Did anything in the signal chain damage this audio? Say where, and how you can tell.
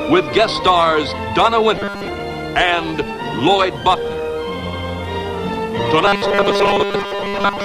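Yes. Robotic sound from repeated short buffers occurs at 1.76–2.08 s and 6.06–7.65 s, where a rigid 200 Hz buzz replaces most of the sound. The driver or buffer likely looped 5 ms blocks while input ran late. Spectrograms show stiff 200 Hz harmonics, and waveforms show identical repeating cycles.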